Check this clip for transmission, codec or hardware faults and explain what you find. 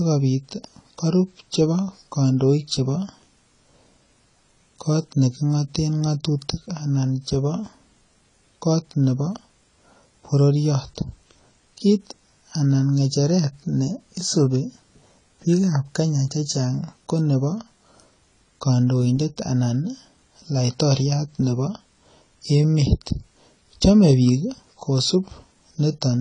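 There's one fault, and it runs through the whole speech clip: AAC compression damage that's plainly audible. Nothing comes through above 10 kHz, so the top end sounds shaved off and dull, and sibilants get a smeary, fizzy edge with a warble. That's likely AAC-LC working at a low bitrate, with the damage pointing to something around 24 kbps. It runs short of bits, drops the cut-off, and coarsely quantises or blanks out the upper bands, leaving the high detail thin and unsteady.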